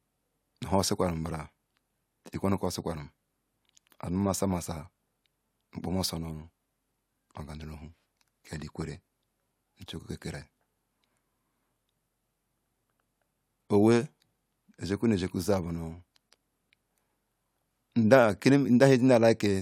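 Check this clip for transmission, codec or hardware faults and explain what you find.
No transmission, codec or hardware faults.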